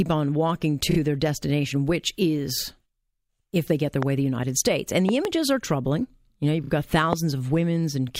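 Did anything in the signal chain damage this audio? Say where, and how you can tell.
Yes. Repeated frames damaged the coded stream. After "on walking", at 0.91 to 0.98 s, the sound stutters before "their destination which is". It happens again at 6.64 to 6.70 s. Each time one 32 ms block plays twice more, adding 64 ms. The fault sits at the codec, storage or network stage. A compressed frame was written or sent more than once, and the decoder simply played it again.

Loud pops land on top of the speech. One comes at 4.03 to 4.05 s, after "if they get their". A close pair spans 5.09 to 5.27 s, before "are troubling". A last one hits at 7.13 to 7.15 s. The first ones peak about 15 dB above the speech. The last peaks about 20 dB above it. The speech carries on underneath each one. That points to a voltage step added in the analogue wiring, likely from static, a plug or a driver glitch.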